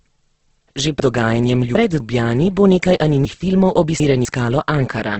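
Throughout, the speech sounds grainy and rough, with nothing above 8.2 kHz. This is likely heavy Opus compression in its music mode at a low bitrate of around 12 kbps. From 1.0 to 2.0 s, and again from 3.25 to 4.25 s, the speech jumbles at hard joins: chunks out of order, with a quarter-second block playing three blocks late.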